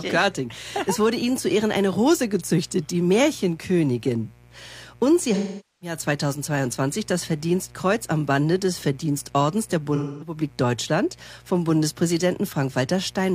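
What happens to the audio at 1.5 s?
At 1.5 s there's mains buzz, running throughout the clip: switching spikes twice per 60 Hz cycle add harmonics into the kilohertz range, giving a steady raspy buzz about 30 dB below the signal.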